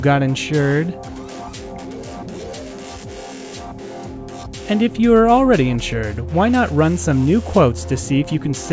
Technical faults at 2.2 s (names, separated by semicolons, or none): none